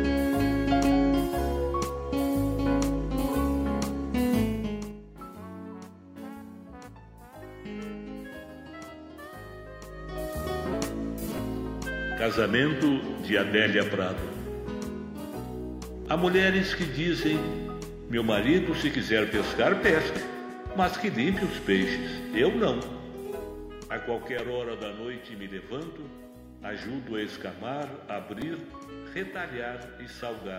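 Repeated buffer at 11.38, 16.05, 24.39 and 28.42 s: each time, fresh audio failed to reach the output in time, so the device replayed its last block of about 2.9 ms, which fits a 128-sample buffer. The block sounds twice more at the first, second and fourth points and three times more at 24.39 s, with a hard join at each repeat. At this tiny size the stutter registers as a brief click or buzz, with roughly 5 ms of sound lost, about 10 ms at 24.39 s.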